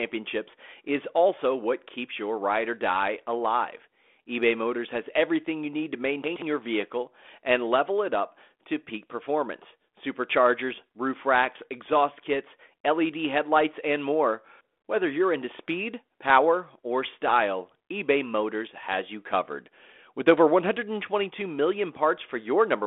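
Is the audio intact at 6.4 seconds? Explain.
No. From 6.24 to 6.42 s, after "everything you need to", the chunks are out of order. A 60 ms chunk plays two chunks late, giving a jumbled moment before "your vehicle and level".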